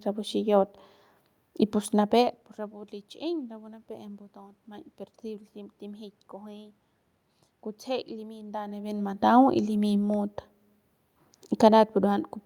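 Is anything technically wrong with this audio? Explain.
No, nothing in the signal chain is misbehaving: the background noise is the room's own sound, and the level shifts around 2 s and again near 8.5 s are the talker moving relative to the microphone rather than anything the system did.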